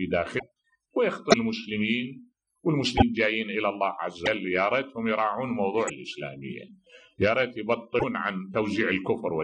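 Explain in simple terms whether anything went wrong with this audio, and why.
Six brief glitches interrupt the sound, at 0.38–0.43, 1.29–1.34, 2.97–3.02, 4.25–4.27, 5.87–5.90 and 7.98–8.04 s. Each is a short skip or garbled burst spanning one to two 26 ms MP3 frames. The likely cause is a broken MP3 bit reservoir: frames were lost, and the next frames pulled their borrowed data from the wrong bytes.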